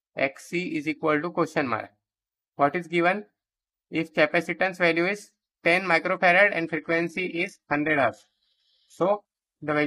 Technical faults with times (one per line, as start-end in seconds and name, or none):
6.76-9.87 adaptive stream at a lower bitrate